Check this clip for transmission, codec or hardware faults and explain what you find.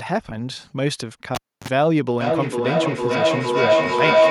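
Two faults stand out in this speech clip: a cable pulled and plugged back in, then a feedback howl that runs to the end.

From 1.35 to 1.68 s there is a sharp pop, then near silence for about 285 ms, a brief burst of 50 Hz hum lasting about 43 ms, and a second pop as the speech returns. This is a cable pulled and plugged in while live. The first pop is the connection breaking, and the gap is the signal path left open. The buzz comes as the plug goes back in and only its tip touches, picking up mains hum before the ground connects. The final pop is the full contact restoring the signal.

From 2.2 s to the end of the clip, a tonal howl near 700 Hz swells and pulses at roughly 400 ms intervals, peaking about 6 dB above the speech. This is feedback howl. The loudspeaker's output reaches a microphone on the same call, and each trip around that loop comes back louder. The repeats narrow to the frequency the loop favours, here around 700 Hz, and pulse at the loop's round-trip delay of roughly 400 ms. 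The howl does not stop because the loop is never broken.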